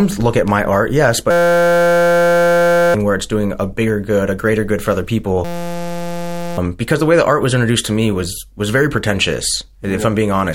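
At 1.31 to 2.94 s, after "at my art yes", and again at 5.45 to 6.58 s, after "greater good for other", a system hang loop replaces the speech with a steady 172 Hz buzz. The system stalled while the hardware replayed one 5.8 ms chunk, which fits a 256-sample buffer. Unlike a dropout, the gap is filled rather than silent, and roughly a second and a half, then about a second, of speech is lost.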